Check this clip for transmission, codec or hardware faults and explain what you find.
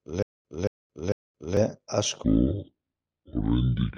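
Two faults are present in this speech clip.

Stutter with silent gaps, from the start to 1.57 s: a 225 ms burst repeats three times, with 224 ms of silence between. A stalling stream replaying its last fragment is the likely cause.

Section at the wrong speed, from 2.24 s to the end: the speech plays at 0.58 times speed, roughly ten semitones lower, deep and dragging. The likely cause is a wrong playback clock.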